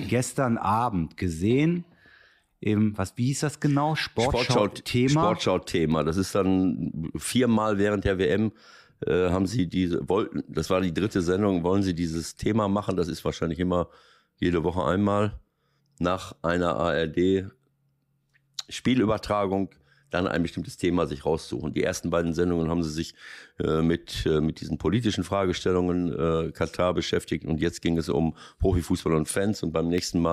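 A click lands on the speech every 1.2 seconds, from about 1.10 s to 29.98 s, roughly thirty of them at a steady beat. These are clock drift buffer slips, likely from two devices running on separate clocks that disagree by something on the order of 150 parts per million. The buffer between them slowly drifts until a handful of samples is dropped or repeated, and each correction leaves a discontinuity in the waveform.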